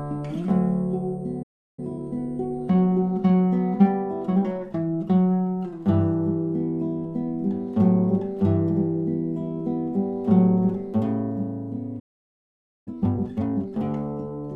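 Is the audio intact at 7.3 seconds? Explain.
Yes, the audio is intact at 7.3 seconds, with no dropout, click, distortion or other fault at that moment.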